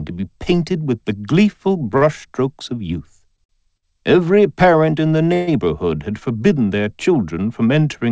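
At 1.97–2.03 s, 3.36–3.40 s, 3.44–3.51 s and 3.77–3.85 s come four short stalls from late packets. Each time the jitter buffer ran dry, and the receiver held the last sound for 44, 18, 50 and 55 ms before resuming where it left off, so nothing is lost. Each one sounds like a brief snag or buzz. On a spectrogram it shows as a short stretch of flat, repeated harmonics. In the waveform it appears as a run of near-identical cycles.

From 5.34 to 5.49 s a call audio freeze holds the sound for 136 ms. The likely cause is packets held up in transit, which emptied the jitter buffer. The receiver carries the last sound on as a fading buzz rather than silence, then picks up again with nothing missing. A spectrogram shows a smeared, decaying band with no new detail. The waveform shows a tapering, repetitive section. Throughout, the band stops at 8 kHz, which fits a 64 kbps G.722 call path.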